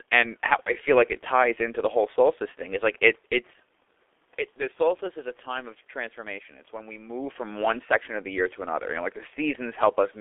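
A speech recording runs through the G.723.1 codec for its whole length, and the coding damage is heavy. The band sits between about 250 Hz and 3.5 kHz, so the voice sounds thin and muffled. The codec works in 30 ms frames and adapts its voice model slowly. That leaves a hoarse, rough texture and smeared consonants, which fits a bitrate near 6 kbit/s. The level shifts around 3 and 7 seconds come from the talker moving, and the room noise is real.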